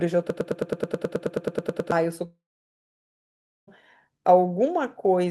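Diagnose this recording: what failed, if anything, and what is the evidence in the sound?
Broken-record loop, 0.30 to 1.92 s: a 107 ms fragment of speech repeats exactly, back to back, 15 times. This is likely a playback or stream buffer stall, where the player kept re-sending the last fragment it held, so the speech due in that span never plays.

Long network dropout, 2.25 to 3.69 s: about 1.4 s of speech is missing. The last sound continues briefly as a fading buzz or hiss, then about 1.3 s of silence follows before speech resumes without the lost part. Packets likely stopped arriving, and the receiver concealed the gap with synthetic fill that decayed to silence.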